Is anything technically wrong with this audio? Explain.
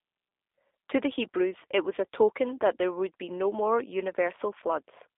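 Yes. Throughout, the speech carries G.729 codec damage: nothing above about 3.7 kHz survives, and the low end starts near 300 Hz. Each 10 ms frame is rebuilt from a vocal-tract filter, pitch prediction and sparse pulses, which fits an 8 kbit/s G.729A stream, so syllables sound plainly rough and synthetic.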